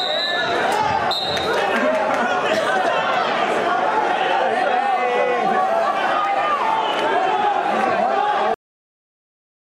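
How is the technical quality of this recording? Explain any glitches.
The recording has two clear faults: a burst of phone interference and an abrupt ending.

From 5.59 to 6.76 s, GSM phone buzz appears. A nearby 2G phone's radio bursts at about 217 Hz are rectified by the audio circuitry, producing a harsh, harmonic-rich rasp roughly 18 dB below the signal. It stutters on and off, as during a data transfer. Mains hum, by contrast, would be a smoother, steadier tone at 50 or 60 Hz.

At 8.54 s the audio has a cut-off end. The final buffers were never written, so the sound stops mid-event and drops straight to digital silence with no decay. Unlike a dropout, nothing resumes afterward, and unlike a fade, there is no gradual loss of level.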